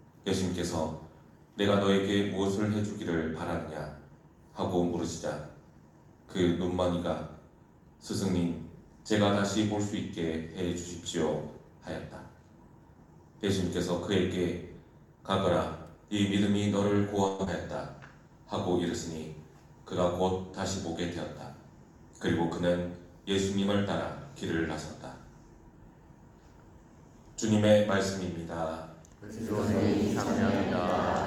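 At 17.27 s the sound stops advancing and the last fragment is stretched into a fading buzz that lasts until 17.41 s, about 114 ms in all. This is a call audio freeze, most likely caused by packets being held up in transit so that the jitter buffer ran dry and the receiver had to extrapolate. Nothing is lost: when the packets arrive, playback resumes exactly where it paused, now running about 114 ms later than before.

Immediately afterward, from 17.45 to 17.48 s, there is a brief smeared wobble, a short concealed packet loss. About 60 ms of audio never reached the decoder in time. The receiver bridged the hole with roughly 16 ms of synthesized continuation and then crossfaded back into real audio, skipping the rest. That skip pulls playback back by roughly 40 ms, recovering part of the delay the freeze had added.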